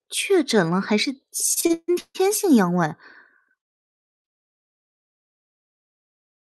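From 1.53 to 2.17 s the speech stutters. These are repeated stalls. Audio reached the receiver late, so its jitter buffer ran dry five times in quick succession. Each time, the last sound was stretched to cover the wait, and the longest hold, 145 ms, fades. About 0.37 s of the span is filled this way, nearly 60 percent of it. Nothing is lost, but the speech drags and judders. The call codec's band stops near 12 kHz.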